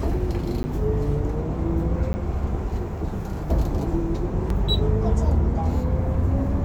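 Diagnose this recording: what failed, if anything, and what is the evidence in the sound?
Driver or buffer: 10 ms blocks of digital silence at 0.63 s and 2.13 s, likely where the output buffer went unfilled. They appear as flat near-silent runs, spectrogram gaps.

Playback: a CD skip at 4.50 s. The laser jumped tracks, giving a tick and a brief mute before the sound resumes elsewhere. On the spectrogram it is a vertical line and a discontinuity.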